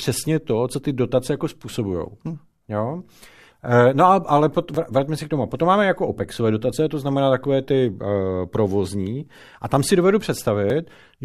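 Tiny skips at 0.75, 4.75, 6.72 and 10.70 s come from overlap between stream segments: overlapping time stamps made the player trim a few milliseconds (up to 18 ms), so the waveform jumps.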